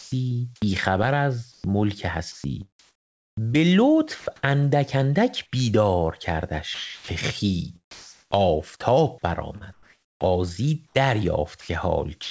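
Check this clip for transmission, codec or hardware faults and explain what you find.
Voice-detector gating on the sending side is the main problem, with three related faults across the recording. The audio comes through a call path with nothing above 8 kHz, which fits a 64 kbps G.722 link.

Sound dropped by the voice detector occurs at 0.00–0.12 s, 6.74–7.08 s and 7.91–8.31 s. Each time the speech gives way to a smooth, even hiss and then returns. Most likely the sender's detector judged the sound to be background and stopped transmitting, so the receiver filled roughly 120, 340 and 400 ms with synthetic comfort noise. Unlike chopping, each dropout is a single clean gap with one switch off and one switch back on.

An onset clipped by the voice detector occurs at 0.60–0.62 s. The speech starts abruptly, with no soft attack, as if the first 20 ms were shaved off. The likely cause is a detector that reacted a beat late to the restart, so those opening milliseconds were never sent and comfort noise stood in for them. 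What sets this apart from a dropout is its position and size: only the leading edge is lost.

Sound chopped by the voice detector occurs at 1.52–4.26 s and 9.18–12.30 s. In these stretches the speech turns choppy: quiet syllables and word edges vanish. About 880 ms and 800 ms are replaced in total. The likely cause is a detector toggling between sending and muting several times within each span. Repeated switching, rather than one gap, distinguishes it from a simple dropout.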